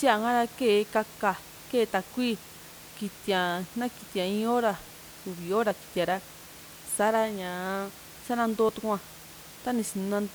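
The recording likely dropped a brief slice of audio, roughly 20 ms, while handing over from one 3-second chunk to the next, a case of audio missing between chunks. At 8.69 s the speech skips abruptly, the two edges butted together without any gap, while the room noise sits about 20 dB below the speech.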